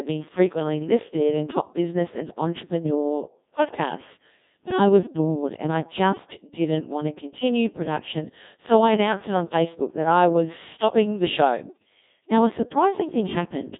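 It's a speech clip run through the Codec 2 vocoder for its whole length, and you can hear it straight away: the voice comes out robotic and buzzy, because the decoder rebuilds it from sine waves driven by pitch, voicing, energy and a rough spectral envelope rather than keeping the actual waveform. The damage is heavy, which fits a low mode around 1.6 kbit/s. The band is squeezed to roughly 150 Hz to 3.7 kHz, with nothing at all above 3.8 kHz.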